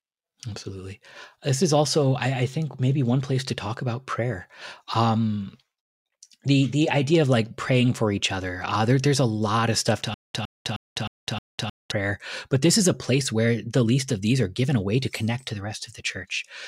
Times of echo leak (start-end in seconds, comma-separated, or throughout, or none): none